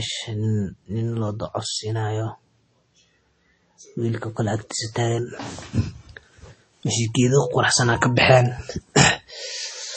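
From start to finish the speech carries MP3 compression damage that is plainly audible, likely from an encoder starved of bits, which fits a low bitrate of about 32 kbps. The treble stops at a fixed 8.4 kHz, leaving s sounds dull, and weak frequency lines drop in and out between frames, giving a watery, swirling texture with metallic chirps on sibilants. A spectrogram shows a hard flat ceiling at 8.4 kHz and speckled, patchy gaps in the upper bands.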